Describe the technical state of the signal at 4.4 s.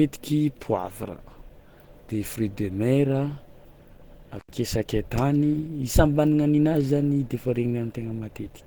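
A loose contact briefly opens the signal path from 4.35 to 4.52 s, cutting the sound out for about 94 ms with crackle at either edge and faint hiss in the gap. Underneath, the coding is likely Opus around 16 kbps in hybrid mode, which leaves the speech plainly hoarse, grainy and muffled, though still fullband.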